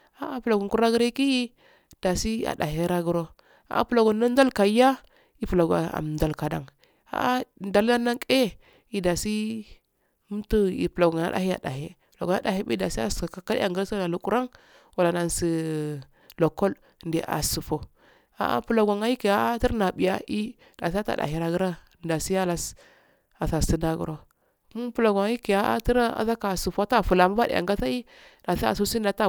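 No technical faults are audible anywhere in the speech recording.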